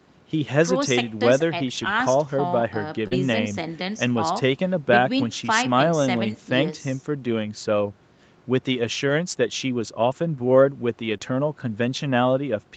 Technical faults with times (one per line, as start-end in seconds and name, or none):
1.77-1.91 lost packet rebuilt from error correction
3.07-3.13 short concealed packet loss
3.11-3.17 lost packet rebuilt from error correction
4.33-4.35 lost packet rebuilt from error correction
9.09 lost packet rebuilt from error correction
10.11-10.13 lost packet rebuilt from error correction
11.17-11.22 short concealed packet loss